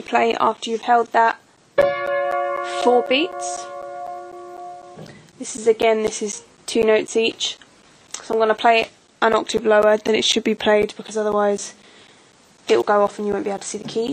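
A background task stalling the USB bus or audio driver every 0.25 s causes periodic USB or driver dropouts from 0.07 s to 14.08 s. Each stall blanks around 10 ms of audio with silence, heard as a steady ticking that sounds only while signal is present.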